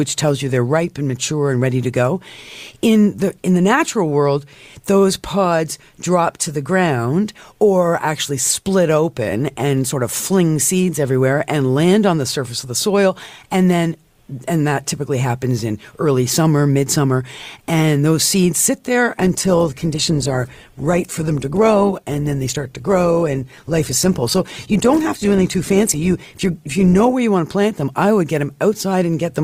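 An adaptive stream stepped down to a lower-bitrate version of this speech clip from 19.13 to 27.13 s, after "those seeds sit there", then recovered before "you want to plant". The quality changes abruptly, with codec artefacts rising and no gap, consistent with Opus dropping from 64 to 16 kbit/s.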